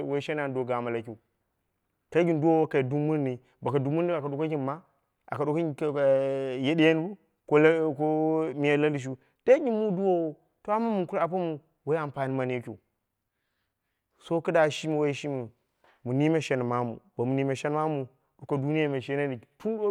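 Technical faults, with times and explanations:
No technical faults can be heard in this speech recording.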